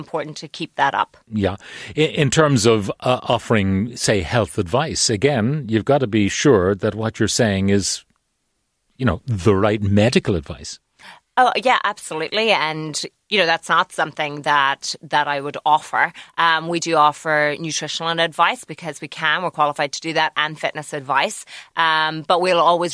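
Speech recording; nothing audibly wrong at any point.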